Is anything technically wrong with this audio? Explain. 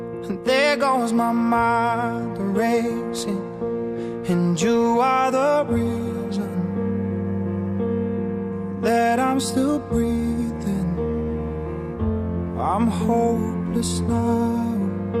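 No, nothing technically wrong can be heard anywhere in this audio.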